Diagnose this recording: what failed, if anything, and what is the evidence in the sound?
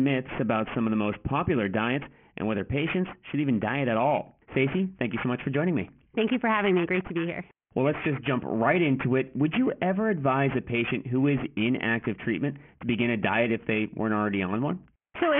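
Sample-rate conversion failed: throughout, sibilants sound gritty and metallic, consistent with an unfiltered downsample to about 6 kHz, aliasing fairly strongly above 3 kHz. A spectrogram shows mirrored energy running hard to 3 kHz.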